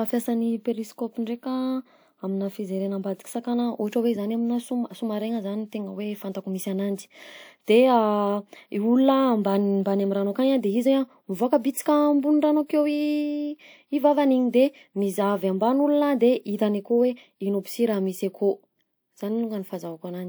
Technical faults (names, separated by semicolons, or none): pre-echo